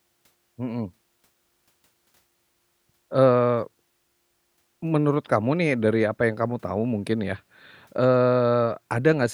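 No technical faults are audible anywhere in this speech recording.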